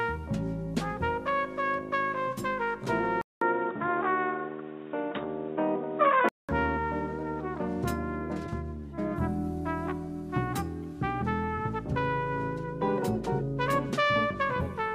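Input switched to a poorer device, from 3.21 s to 6.49 s: after a silence of about 200 ms, the sound turns dull and boxy, with nothing above 3.8 kHz, a level shift of roughly 5 dB and a new background noise sitting well below the signal. The likely cause is the recording input moving to a narrower-band microphone or headset profile with its own tone and noise. At 6.49 s the full bandwidth returns just as abruptly.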